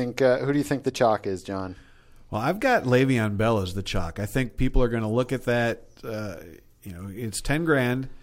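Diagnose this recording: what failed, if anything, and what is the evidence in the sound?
No fault is audible here.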